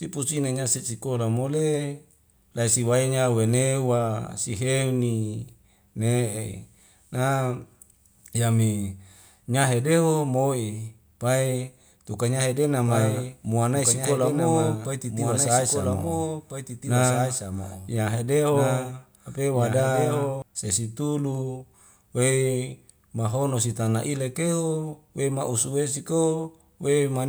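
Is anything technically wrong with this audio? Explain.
Yes. From 12.86 s to 20.42 s, just after "tukai nyahe", there is a doubled audio track: a second, unreverberated copy of the speech runs about one and a half seconds behind, roughly 5 dB quieter. It likely comes from a slower capture path, and it cuts in and out abruptly.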